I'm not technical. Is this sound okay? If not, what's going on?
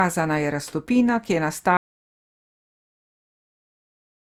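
No. Throughout the clip the speech has generation loss. It sounds swirly, smeared and somewhat hollow, and the starts of sounds are blurred rather than crisp. The likely cause is that the recording was compressed, decoded and compressed again about three times. Each pass throws away a little more detail in slightly different places, so the damage builds up beyond what a single compression would cause.

There is also an audio dropout to silence. At 1.77 seconds the speech cuts off mid-flow and does not return. From there to the end the clip is dead silent, with no background hiss or room sound at all. That most likely means the input was lost, perhaps through a disconnected microphone, a failed link or an accidental mute, while the recorder kept writing empty audio. Whatever followed is gone.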